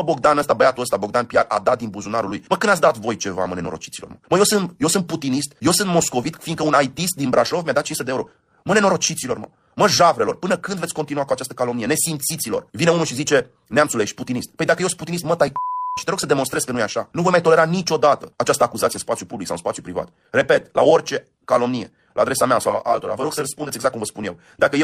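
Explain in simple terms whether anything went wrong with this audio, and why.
Channel delay (comb filtering) from 22.69 to 23.69 s: one channel lagged about 20 ms before mixing, cancelling some frequencies and making the sound rough or slightly doubled.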